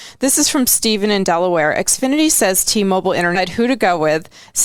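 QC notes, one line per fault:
3.35–3.39 s, stream segment skipped: the speech jumps ahead with a small blip, likely because one stream segment failed to load and the player moved on.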